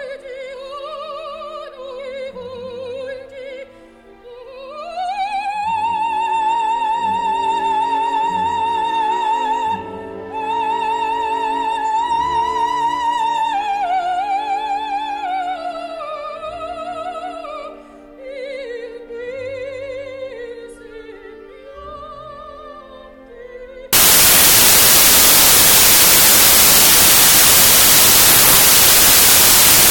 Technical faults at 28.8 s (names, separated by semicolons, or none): wrong sample width